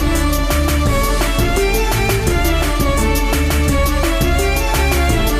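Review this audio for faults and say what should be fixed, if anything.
A loud pop, two sharp thumps between 1.39 and 1.60 s, jumps well above the sound, which continues underneath; a voltage spike from a plug, switch or static discharge is the likely cause. Secure connections, switch gear before recording, and ground equipment properly to prevent it.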